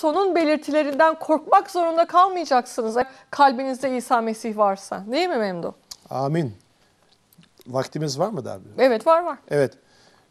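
The recording was likely handled in 4-second chunks, with audio missing between chunks as one block closed and the next opened. At 3.02 s and again at 6.82 s, about a fifth of a second of sound is gone, and the two sides are butted together with no gap of silence. Each join is heard as a sudden skip forward, the sound jumping ahead as though a short piece had been snipped out.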